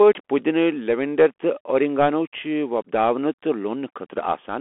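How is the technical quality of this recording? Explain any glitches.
The technical quality is poor because a narrowband headset link affects the whole clip. Throughout, the Bluetooth CVSD headset codec sends one up-or-down bit per sample, fitting a 64 kbps stream, and confines speech to 250 Hz to 3.4 kHz. This gives scratchy s sounds and granular hiss, and a spectrogram is empty above 3.8 kHz.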